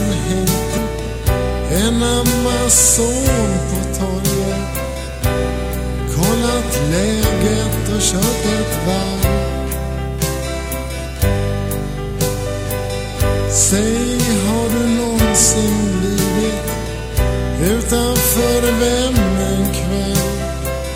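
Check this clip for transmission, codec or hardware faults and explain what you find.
There is one fault, a skip ahead at 0.77 s. A stretch of audio was discarded in transit or dropped from an overflowing jitter buffer, so playback leapt forward with no gap, losing about a fifth of a second and splicing the sound abruptly together.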